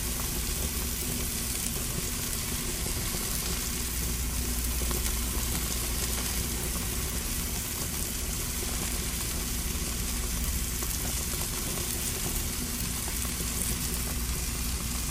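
At 6.83 s and again at 9.75 s, brief glitches from damaged data in a compressed stream: corrupted bytes make the decoder misread frames and hunt for sync. On a spectrogram each shows as a thin broadband vertical smear, and the waveform as a sudden jagged blip.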